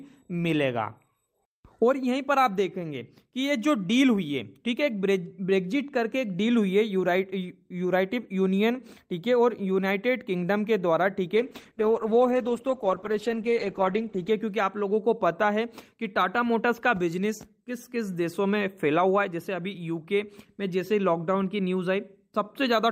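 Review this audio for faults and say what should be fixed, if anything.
A call bitrate drop runs from 11.36 s to 14.37 s. The encoder was starved of bits and coded the sound more coarsely, giving a rough, smeared texture with the top end shaved off, which fits a fall from roughly 48 kbps to about 15 kbps, held near the bottom for about 2.95 s. Packet loss gives brief gaps or robotic stutters. Here the sound stays continuous and only its quality sinks, then recovers. To prevent it, give the call a stable uplink with bandwidth headroom, and set a sensible minimum encoder bitrate.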